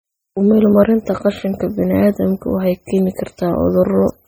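Throughout the speech, the treble is sharply cut and the sound turns watery, with chirpy, metallic s sounds and smeared onsets, likely from heavy MP3 compression at a rate that fits about 32 kbps. Unlike a plain low-pass filter, the swirling comes and goes frame by frame.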